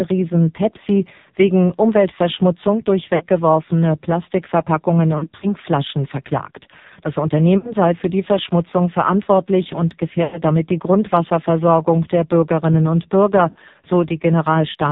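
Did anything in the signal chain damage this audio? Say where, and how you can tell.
Yes. At the codec stage, the whole clip has been through AMR narrowband mobile coding at 5.9 kbps, heavily damaged: nothing above 4 kHz survives, and the speech sounds buzzy and synthetic because the low bitrate leaves few pulses to excite the vocal tract model.

At the network stage, lost AMR speech frames cause drawn-out, fading smears at 3.16–3.25 s, 5.18–5.54 s, 7.58–7.73 s, 10.24–10.41 s and 13.50–13.60 s. Radio errors failed the frame checksums, so the decoder repeated the last good pitch and vocal tract settings at falling gain.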